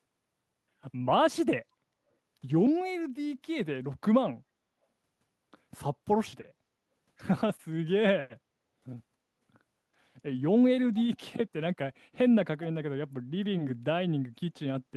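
Echo leak at 10.94 to 11.03 s in this speech clip: a brief, faint copy of the talker returns about 0.3 s after the original, roughly 20 dB below the direct speech. This is likely one end of the call playing audio over a loudspeaker while its echo canceller fails to fully subtract what its microphone picks up, so a residue is sent back. The call codec's upper limit sits near 12 kHz throughout.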